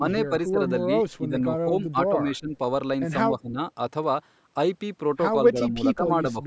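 Speech suppressed in double talk first appears from 0.00 to 0.59 s, then again at 1.03 to 1.34 s, 1.71 to 2.55 s, 3.38 to 3.60 s and 5.50 to 6.47 s. In each stretch the speech sinks by roughly 10 to 15 dB in short pieces, dipping and partly dropping out. This is likely the echo canceller hearing both ends talking at once and, unable to separate this talker from loudspeaker echo, turning everything down together.

Echo leak occurs between 1.11 and 1.15 s, inside the second suppressed stretch. A faint scrap of the voice returns about 210 ms late, very low at around 40 dB under the speech. The likely cause is a loudspeaker on one side whose echo canceller let a little of its microphone pickup through and sent it back. The band-limited top end, with nothing above 8 kHz, comes from normal call microphone processing.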